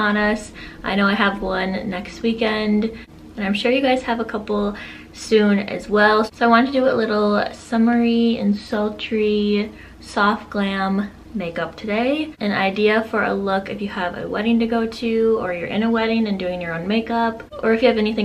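Nothing technically wrong turns up anywhere in this audio; it just runs along without a hitch.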